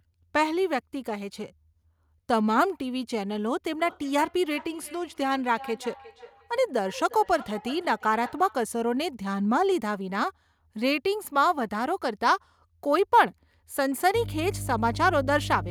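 From 3.78 s to 8.65 s there is feedback echo between two devices. Two devices in the same room sit on one call. One plays back what the other's microphone sent, and that microphone hears it again. Each device's echo canceller only removes its own playback, so the loop survives. Each word returns roughly every 0.4 s, thinner and more ringing with each pass. The repeats peak at about 18 dB below the speech.

From 14.15 s to the end there is mains hum. Power-line energy leaks into the signal, from a ground loop or a nearby transformer. It sounds like a steady low drone at 50 Hz, with some low harmonics above it. The hum is strong, roughly 5 dB below the signal. That makes it very prominent over the final stretch of the speech.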